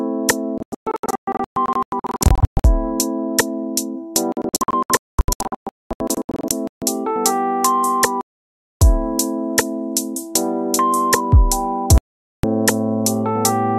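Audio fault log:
0.58–2.65 s, 4.32–6.82 s, 8.21–8.82 s, 11.98–12.44 s: digital broadcast dropout. The receiver muted whenever frames arrived corrupt. The first two spans are riddled with short holes (longest 0.12 s and 0.22 s), and the later two are solid gaps of 0.6 s and 0.46 s. On the waveform these appear as flat-line gaps, and on the spectrogram as blank full-band columns.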